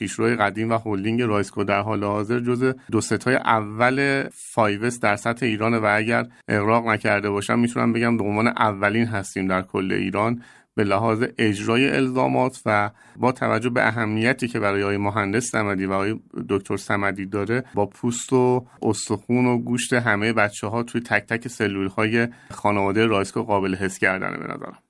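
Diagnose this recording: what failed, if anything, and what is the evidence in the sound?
Nothing stood out on listening to the speech in this recording, with no audible sign that any stage along the chain failed.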